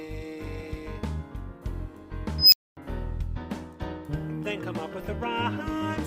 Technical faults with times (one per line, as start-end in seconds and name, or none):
2.38-2.77 unstable filter